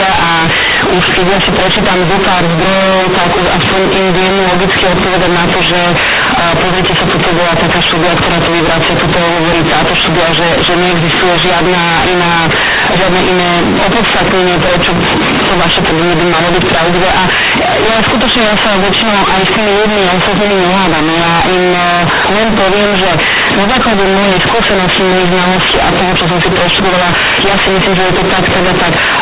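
From the start to the end of the speech, the audio is companded audio read as linear: A-law bytes are played back as plain 8-bit samples without expansion. Small values jump across half the output range, producing loud, buzzy distortion and heavy noise in the pauses, above an 8 kHz telephone-band A-law signal.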